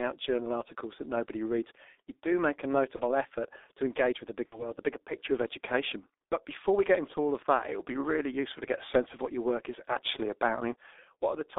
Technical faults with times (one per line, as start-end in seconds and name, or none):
0.00-11.59 G.723.1 codec
2.96-3.02 VoIP packet loss concealed by the speech codec
4.46-4.66 VoIP packet loss concealed by the speech codec